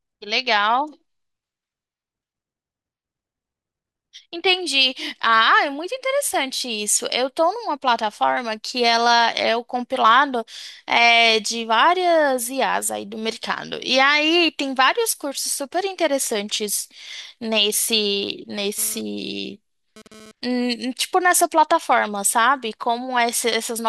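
A nearby 2G phone starts a data transfer at 18.78 s, and the audio circuitry rectifies its radio bursts into the signal path. The result is GSM phone buzz: a hard, raspy tone at about 217 Hz, rich in harmonics and unrelated to the speech, sitting about 22 dB below it. Because the phone is moving data rather than holding a call, the buzz stutters in and out before stopping at 20.31 s.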